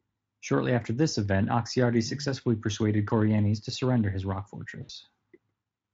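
It's a speech clip with one real problem: VoIP packet loss concealed by the speech codec, right after "to surrender his rock", from about 4.83 to 4.91 s. Roughly 60 ms of audio went missing, which fits three lost frames, and the decoder bridged the gap by carrying its last pitch and filter forward at falling gain. You hear the tail of the sound smeared into a brief buzzy tone or coloured noise that fades. The Speex coding itself sounds like a fairly high-quality setting, with little or no hoarseness of its own.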